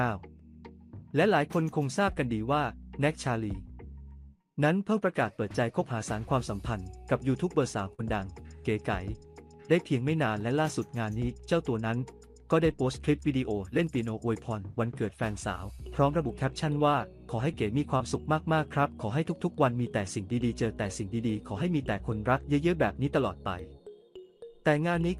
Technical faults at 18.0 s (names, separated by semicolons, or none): short concealed packet loss